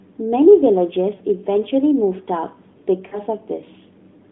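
At 1.16 to 1.22 s and again at 3.08 to 3.21 s, lost AMR speech frames occur. About 40 ms of data goes missing each time, which fits two 20 ms frames. The decoder repeats its last pitch and vocal tract settings at falling gain, so the speech smears into a brief, fading warble before returning momentarily weak or rough.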